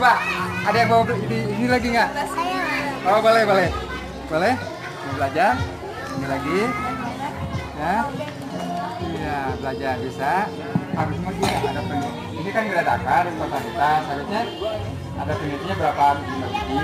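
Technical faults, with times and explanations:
No technical faults can be heard anywhere in the clip. There is nothing to mark at any point in the audio.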